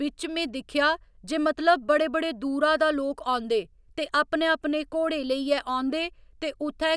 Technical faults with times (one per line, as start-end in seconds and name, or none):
none